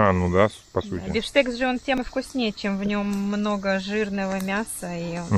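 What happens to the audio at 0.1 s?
Nothing goes wrong at 0.1 s; the audio plays through that moment intact, with no dropout, glitch or distortion to be heard.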